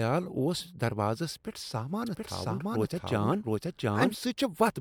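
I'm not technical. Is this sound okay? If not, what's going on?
No. From 2.06 to 4.14 s there's a doubled audio track. The speech repeats about 0.7 seconds later, equally loud, likely from a second, slower recording path.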